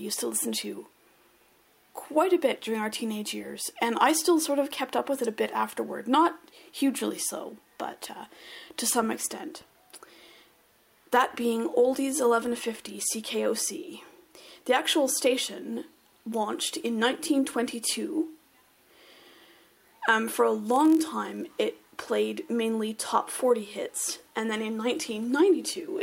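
A block size mismatch (padded) runs from 20.65 to 21.46 s of the audio. One stage hands over blocks slightly shorter than the next stage reads, and the missing samples at the end of each block are filled with zeros. The resulting short gaps repeat at 43.1 Hz, heard as a buzz at that rate, which fits a 1024-sample read block. The shortfall is small, so playback slows only to 0.999 times normal speed, with pitch essentially unchanged.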